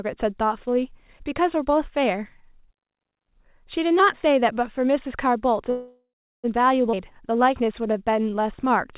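From 5.7 to 6.46 s the speech stops and a fading buzz or hiss fills the gap. About 370 ms of that is silence. This is a call audio freeze, likely from delayed packets draining the jitter buffer. The speech resumes where it stopped, about 735 ms late.

At 6.92 to 6.95 s there is a skip ahead. Roughly a third of a second of speech is gone. The two sides are joined almost directly, with only a 12 ms fill. The audio was dropped on the way or by the buffer, cutting the delay.

From 6.95 to 8.94 s comes a jitter buffer slow-down. The speech plays at about 91% speed, with pitch unchanged. Repeated pitch periods add 187 ms. Sounds are drawn out, over the narrowband tone of a call codec with nothing above 4 kHz.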